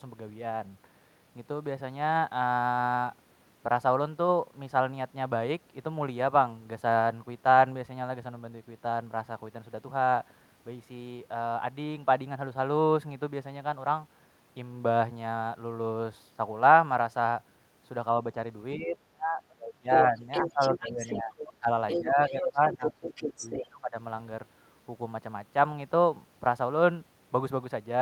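From 18.77 to 21.69 s the talker is pulled down by around 20 dB in places. This is speech suppressed in double talk, likely from an echo canceller that could not tell near speech from loudspeaker echo and attenuated both. From 20.02 to 21.53 s, the other side's voice leaks through only a few dB below the talker, likely as residual echo the canceller failed to remove. The pattern repeats. Leakage runs from 21.88 to 23.65 s, and suppression from 22.01 to 23.96 s dips the talker by around 15 dB.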